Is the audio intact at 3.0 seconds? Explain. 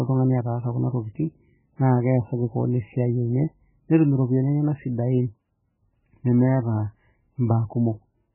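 No, at 3.0 s the speech sounds watery and swirly, as it does for the whole clip, with nothing above about 2.9 kHz. That fits heavy MP3 compression at a starved bitrate, likely near 8 kbps, where the encoder cuts the treble and lets weak frequency lines flicker between frames.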